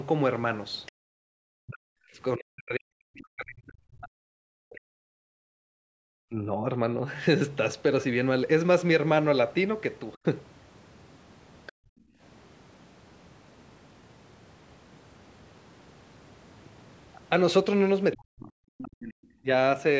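Other side's voice leaking through at 0.86 to 0.92 s: a faint scrap of a second voice, around 25 dB below the talker, likely loudspeaker playback the echo canceller failed to remove. Background gated by the echo canceller follows at 0.92 to 1.28 s. The canceller clamps the microphone while the loudspeaker plays, so the room sound drops by about 40 dB before returning. Speech suppressed in double talk runs from 1.56 to 6.66 s, with the talker's voice dipping or breaking up for roughly four seconds, as much as 40 dB down. With both sides talking, the canceller likely could not tell voice from echo. The background gates again at 5.41 to 5.98 s, and suppression briefly cuts the voice at 10.15 to 10.21 s. Leakage returns at 11.66 to 11.72 s, around 20 dB down, with gating right after at 11.72 to 12.21 s. A final leak at 18.13 to 18.17 s runs into suppression from 18.16 to 19.47 s. Across the clip the call's band-limited microphone path carries nothing above 8 kHz.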